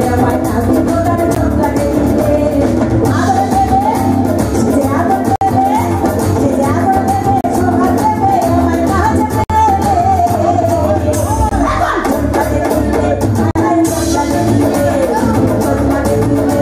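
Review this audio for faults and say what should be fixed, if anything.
Hard-edged silent holes at 1.35, 5.36–5.41, 7.41–7.44, 9.44–9.50, 11.49–11.52 and 13.51–13.55 s: a gap between stream segments, where mismatched 2-second segment timestamps leave silence. Fix it by making each segment's start timestamp match the previous segment's end exactly.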